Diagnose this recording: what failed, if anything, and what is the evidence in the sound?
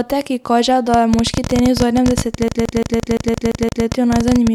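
A train of clicks starts at 0.94 s, after "ki kaže", and runs to the end. Uneven ticks come about 12.6 times per second, well above the speech. The likely cause is interference in the analogue wiring.

A CD stuck on one turn appears at playback, from 2.48 to 3.86 s. The same 172 ms loop repeats eight times with brief mutes. The laser jumps back one track every revolution.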